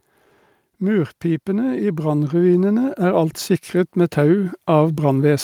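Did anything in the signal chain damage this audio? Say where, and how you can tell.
Yes. Call processing's automatic gain is rising twice. From 0.78 to 3.4 s the speech and background swell together by about 6 dB, then again from 3.95 s to the end. The gain control heard a quiet input and slowly pushed its gain up.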